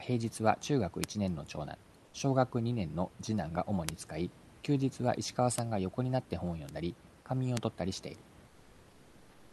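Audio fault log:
1.04, 3.89, 5.58, 6.69 and 7.57 s: bit error spikes. Each time, one to three consecutive samples had a single bit flipped in memory or on a digital link, so the value jumped by a power of two and snapped straight back. The events at 1.04 and 3.89 s span two samples, the one at 7.57 s spans three, and the others span one. Each is heard as an isolated, broadband tick that has nothing to do with the speech around it.
2.05–2.13 s and 8.47–9.53 s: comfort noise in place of the background. The sender stopped transmitting during the gaps in speech, likely through Opus discontinuous transmission, and the receiver filled the silence with synthetic noise shaped like the room. The first gap lasts 80 ms and the second about 1.06 s, running to the end. In both, the real room noise, sitting about 28–30 dB below the loudest speech, gives way to a smooth, featureless hiss that is about 2–3 dB quieter.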